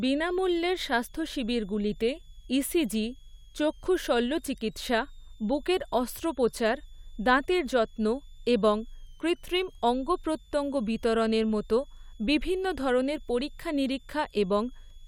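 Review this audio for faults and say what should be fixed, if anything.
A switching supply whistle runs through the whole speech clip, a faint tone wandering between about 3.0 and 3.8 kHz, around 35 dB down. Most likely a power supply slipping into audible burst mode. Power the gear from a clean linear supply or filter the rail.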